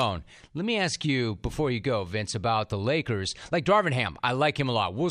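Nothing in this speech recording stands out as a technical fault, so there's nothing to flag at any point along the way.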